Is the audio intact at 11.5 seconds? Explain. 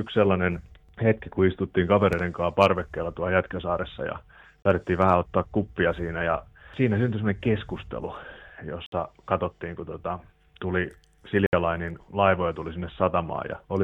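No. There's a short dropout from about 11.46 to 11.53 s, where the sound cuts to silence for roughly 67 ms and then comes back. It behaves like a Bluetooth stall: radio interference likely held up packets on the link, the headphones' small buffer ran empty, and playback had nothing to play until the resent data arrived. You hear a brief hole in the sound.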